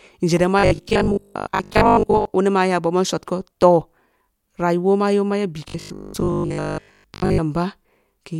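From 0.59 to 2.31 s and again from 5.68 to 7.40 s, robotic sound from repeated short buffers turns the speech into a rigid 50 Hz buzz. This is likely from 20 ms chunks being replayed in place of most of the audio. The waveform shows identical cycles, and the spectrogram shows a fixed comb of 50 Hz harmonics.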